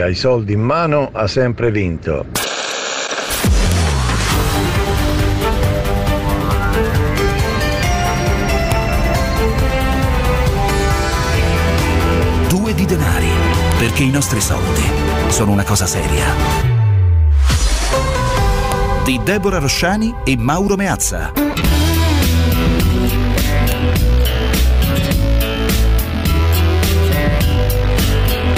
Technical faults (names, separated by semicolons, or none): file header played as audio